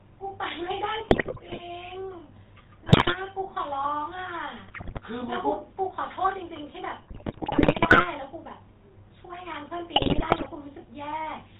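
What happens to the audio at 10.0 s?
At 10.0 s the speech breaks into squawks, pops and gargling for about half a second, from 9.96 to 10.49 s. These are GSM bit errors: corrupted bits reach the decoder and scramble the filter, pitch and gain values, so nearly every frame in that span comes out distorted or with sudden level bursts. The damage is consistent with a bit error rate of roughly 4 percent.

Under this, and present throughout, is the buzzy, gravelly roughness of the GSM full-rate codec, with nothing above 4 kHz. That comes from modelling the vocal tract and driving it with sparse, regularly spaced pulses, which fits a 13 kbps stream.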